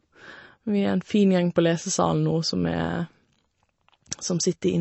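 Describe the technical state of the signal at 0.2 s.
At 0.2 s the speech carries MP3 compression, running throughout the clip and likely from a low bitrate near 32 kbps: nothing above 7.9 kHz, plus watery, swirling flutter that a plain low-pass filter wouldn't produce.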